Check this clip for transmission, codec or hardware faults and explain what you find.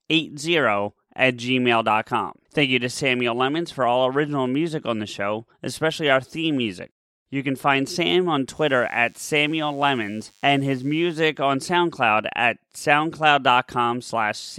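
One hardware-type fault appears in this speech clip: DECT cordless phone buzz, from 8.56 s to 11.23 s. A DECT handset or base nearby transmits a brief radio burst every 10 ms, and the audio circuitry rectifies each burst into a small pulse. It sounds like a thin, steady buzz at 100 Hz, well below the speech. On a spectrogram it shows as evenly spaced horizontal lines at 100 Hz and its harmonics. The waveform carries small regular spikes every 10 ms.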